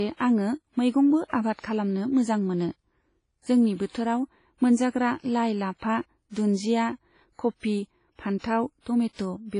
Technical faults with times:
0.00-9.59 WMA compression
3.74-3.94 pre-echo
8.38-8.44 pre-echo
8.80-8.86 pre-echo

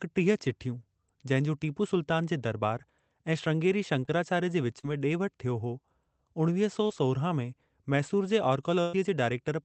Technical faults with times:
4.05-4.09 short concealed packet loss
4.79-4.85 short concealed packet loss
6.87-6.91 short concealed packet loss
8.81-8.95 burst of packet loss

